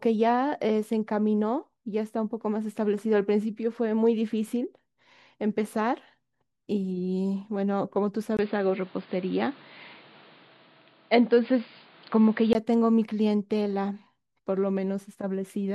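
At 8.37 s the speech turns abruptly dull and boxy, after a very brief dropout of about 20 ms. Nothing above 4.9 kHz gets through, a fresh layer of background noise sits roughly 30 dB under the speech, and the loudness stays about the same. At 12.55 s the fuller sound returns. This points to the input switched to a poorer device, likely a narrower-band microphone or headset profile taking over mid-recording before switching back.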